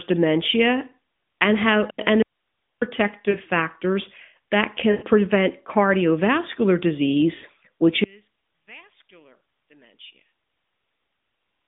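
At 2.22 s, just after "dementia and how and", the speech cuts out abruptly for about 0.59 s, leaving only faint hiss around 55 dB down until "factors that" returns. This is an audio dropout to a faint residue, likely a signal break while the path stayed live.

At 3.30 s (40 ms, before "factors that"), 4.92 to 5.05 s (after "factors that") and 7.36 to 7.46 s, the speech briefly smears and dips before recovering roughly. These are lost AMR speech frames. The decoder repeated its last good parameters with falling gain, and the lengths fit runs of two, five and four 20 ms frames. The sound keeps the narrowband phone quality of 12.2 kbps AMR-NB.

From 8.04 to 11.35 s the speech suddenly sinks by about 22 dB into a faint remnant. One channel inverted is the likely cause, cancelling the centred voice when the channels combine in mono.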